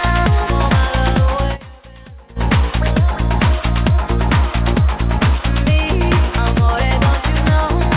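From 1.30 to 2.53 s, a loudspeaker feedback squeal appears. A 4.5 kHz tone swells over roughly a third of a second, ringing a little louder than the sound.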